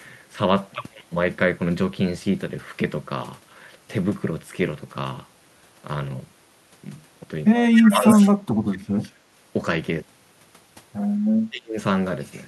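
It's a speech clip, and the talker gets chewed up twice by speech suppressed in double talk, dipping roughly 25 dB across 7.69 to 9.15 s and about 30 dB at 11.49 to 11.77 s, likely a canceller ducking during crosstalk. Echo leak sneaks through meanwhile, a copy delayed 193 ms at 7.76 to 7.81 s, roughly speech level at 8.03 to 8.29 s, and faint at 9.02 to 9.10 s, likely from a speakerphone's incomplete cancellation.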